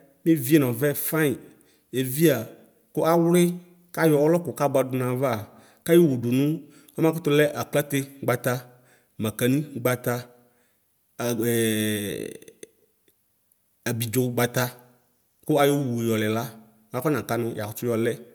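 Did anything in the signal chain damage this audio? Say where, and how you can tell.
No, nothing in the chain audibly damages this speech recording, so there is no stage to point to and no event to time.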